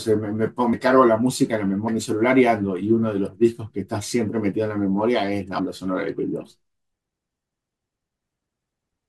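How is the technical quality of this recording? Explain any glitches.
The recording has three glitches from compressed frames skipped, at 0.72, 1.87 and 5.58 s. Whole frames, which fits a frame length of about 26 ms, were missing or rejected by the decoder. The speech jumps ahead by roughly 100, 150 and 70 ms, and each join is a brief smeared blip rather than a click.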